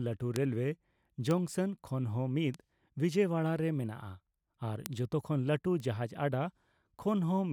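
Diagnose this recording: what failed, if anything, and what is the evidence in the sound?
Five isolated sharp ticks cut through the speech at 0.36, 1.31, 2.54, 4.86 and 5.80 s. They are broadband and unrelated to the speech, peaking at about -14, -20, -26, -8 and -26 dBFS, with the loudest at 4.86 s. This is a bit error spike in the digital path, in storage or on a link. A single flipped bit throws one to three samples off by a power of two before they snap back, producing a click with no tonal character.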